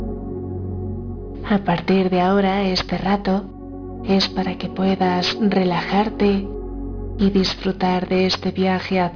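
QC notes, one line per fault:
throughout, aliasing: downsampling without an anti-alias filter, pointing to an 11 kHz rate, folds content above 5.5 kHz into unrelated frequencies about 15 dB down, giving gritty, metallic highs.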